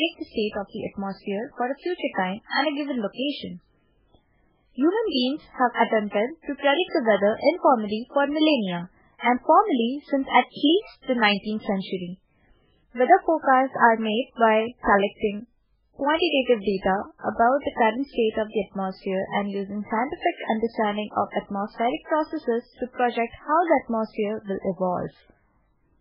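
From start to finish the speech sounds watery and swirly. Nothing comes through above 5.3 kHz, and attacks smear. The likely cause is heavy MP3 compression, which fits a bitrate around 8 kbps. Starved of bits, the encoder cuts the treble and lets weak frequency lines flicker on and off.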